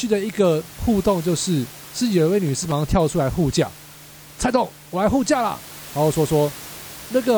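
From 2.47 to 2.72 s an irregular burst of scratchy crackle cuts across the speech, over the room noise sitting about 20 dB below it. This is loose connector crackle: a worn or dirty contact briefly made and broke the circuit, chopping the signal.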